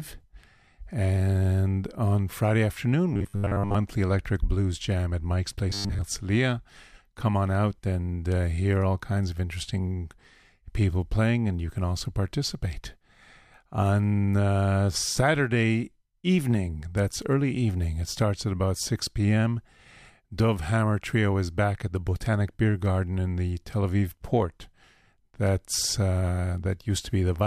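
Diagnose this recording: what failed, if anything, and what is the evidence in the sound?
The speech turns into robotic sound from repeated short buffers at 3.14–3.75 s and again at 5.70–6.02 s: a rigid, metallic buzz pitched at 100 Hz that still loosely tracks the speech. The likely cause is a driver or buffer stage starved of new audio, looping the last 10 ms instead, so most of the real signal in those spans is skipped. A spectrogram would show flat harmonic lines at 100 Hz multiples, and the waveform a repeating 10 ms period.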